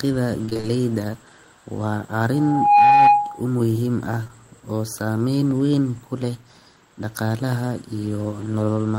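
From 0.45 to 0.65 s, repeated packet loss (robotic sound): five gaps, the longest 27 ms, were patched by extending the previous audio, so half that stretch is filled-in and sounds choppy and mechanical. From 2.33 to 3.46 s, a loudspeaker feedback squeal occurs as the microphone picks up its own output, and an 825 Hz tone builds over roughly 0.4 s to about 10 dB above the speech, ending just before "muuhim ah oo saameyn". At 4.23 s and again at 4.27 s, just after "muuhim ah", two short concealed packet losses of 20 ms each were bridged by continuing the prior sound, leaving a brief smear before "oo saameyn weyn kule".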